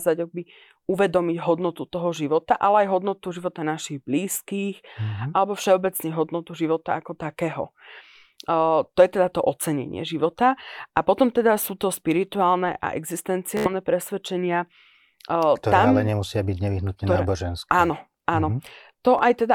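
At 4.33 to 4.36 s, 13.57 to 13.71 s and 19.19 to 19.22 s the speech hits Bluetooth stutter. Packets arrived late or not at all, so the receiver replayed its last slice of sound until data returned. The first and last are brief catches, each fitting one lost packet of about 14 ms. The middle one, about 84 ms lost, is a short machine-gun buzz. A waveform shows identical short segments repeated back to back, and a spectrogram shows a run of copied vertical slices before the sound resumes slightly further on.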